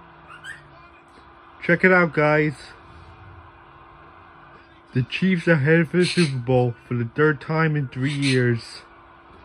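No technical faults are audible.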